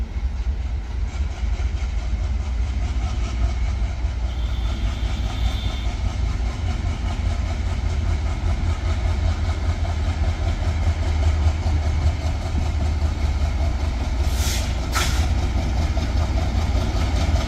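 No audible faults or glitches anywhere in the recording.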